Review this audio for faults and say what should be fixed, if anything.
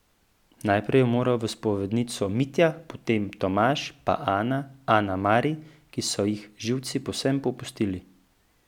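Nothing in the audio needs to be fixed, as no faults can be heard.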